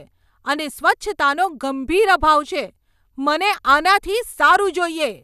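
There are no technical faults to describe in this speech recording.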